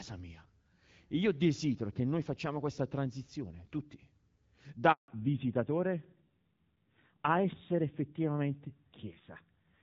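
At 4.92 s a handover gap cuts the speech for 160 ms, until 5.08 s. The waveform drops to a flat line as the call switches networks and no frames arrive. From 5.08 s onward a fallback to narrowband leaves nothing above 4 kHz. The spectrogram shows a hard ceiling there, and the voice turns duller and rougher, consistent with a switch from HD Voice to a low-rate narrowband codec.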